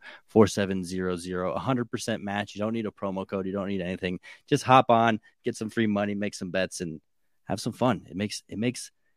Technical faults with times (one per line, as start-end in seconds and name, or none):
0.49-9.17 one channel drops out